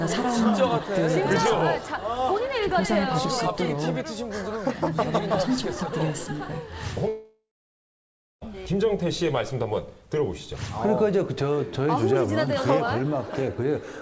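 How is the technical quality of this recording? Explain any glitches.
The recording has one clear glitch, a long network dropout from 7.08 to 8.43 s, heard over a call path whose G.722 coding leaves nothing above 8 kHz. For about 1.34 s the sound is lost. The last moment is stretched into a fading buzz, then silence for the final 0.97 s, and the audio resumes with that stretch missing. The likely cause is lost packets that the receiver concealed, then stopped filling. On a spectrogram this shows as a smeared, decaying band followed by an empty column, and the waveform tapers off and flatlines.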